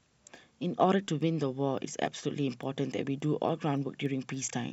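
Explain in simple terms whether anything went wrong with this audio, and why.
Word clock ticks sound from 0.35 to 4.63 s, about three per second. Two unlocked digital clocks keep slipping past each other, each time dropping or repeating a single sample.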